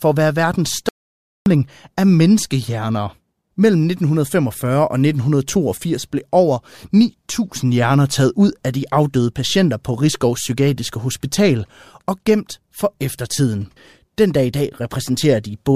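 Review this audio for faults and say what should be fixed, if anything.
Audio dropout to silence from 0.89 to 1.46 s, between "at være verdens" and "af menneskehjerner": 0.57 s of silence, likely a lost input link or momentary mute. Secure connections and monitor input continuously during recording.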